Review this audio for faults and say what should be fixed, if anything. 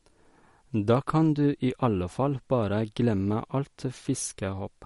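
Throughout the speech there's plainly audible MP3 compression damage, most likely from a low bitrate around 48 kbps. Nothing survives above 11.2 kHz, and starved frequency lines flicker between frames, giving that watery swirl and smeared consonants. Encoding at a higher bitrate would avoid it.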